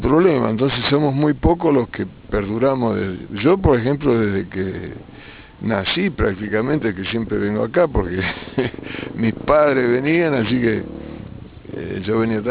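Throughout the clip, the sample rate was cut without an anti-aliasing filter, which fits a drop from a full-band original to about 8 kHz. Everything above the new limit at 4 kHz folds back downward, reflected around that edge, arriving as tones unrelated to the original. This aliasing sits roughly 15 dB below the main signal: bright, hissy content turns gritty and metallic, and the spectrum stays dense right up to the 4 kHz band edge.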